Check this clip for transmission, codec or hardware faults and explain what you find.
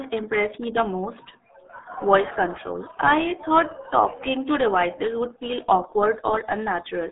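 One codec fault runs through the whole speech clip: RealAudio 14.4 codec damage. Nothing passes above 3.8 kHz, and the heavy gargly smearing points to an 8 kbit/s dial-up speech codec. Plain telephone band-limiting would sound clean, not warbled.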